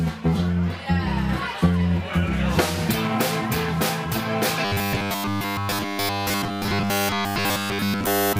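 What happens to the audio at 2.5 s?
Nothing goes wrong at 2.5 s; the audio carries on intact through that moment with no dropout, click or other fault.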